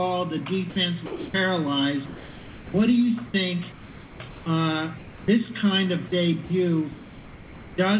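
Sound chopped by the voice detector appears three times, from 0.70 to 1.34 s, 3.26 to 4.46 s and 6.08 to 7.78 s. Within these stretches the sound keeps breaking up as the sender's voice detector, likely misjudging quieter parts as background, toggles between sending and muting. About 340, 740 and 940 ms respectively are swapped for comfort noise. On a waveform these sections show ragged gaps filled with a low, even hiss. A spectrogram shows detailed texture alternating with flat, featureless noise bands.

Sound dropped by the voice detector occurs at 2.06 to 2.74 s and 4.98 to 5.28 s. Here the detector likely took trailing or quiet sound for background and stopped sending altogether. The receiver filled 680 and 300 ms with comfort noise, removing about 410 and 130 ms of real sound. Each appears as a single clean-edged block of steady noise before the signal resumes.

Throughout, nothing reaches above 4 kHz, which points to a narrowband call codec such as G.711 A-law.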